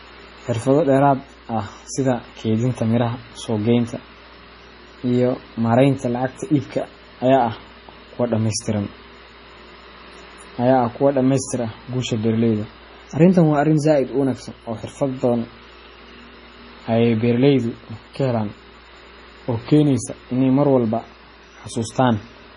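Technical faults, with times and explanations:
Throughout, MP3 compression: the speech has nothing above 10.6 kHz, and a watery, swirling texture runs under it, with metallic chirps on s sounds and smeared consonant attacks. This is likely heavy MP3 encoding at a low bitrate, which fits roughly 24 kbps: with so few bits the encoder cuts the treble at a fixed frequency and zeroes weaker frequency lines, which then flicker on and off from frame to frame.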